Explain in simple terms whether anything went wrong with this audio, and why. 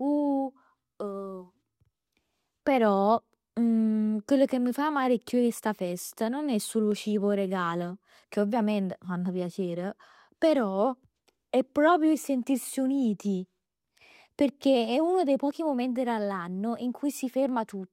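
A click repeats about every 2.64 s, from 1.64 s to 17.49 s. This is likely clock drift buffer slips, where two mismatched device clocks force a few samples to be dropped or repeated.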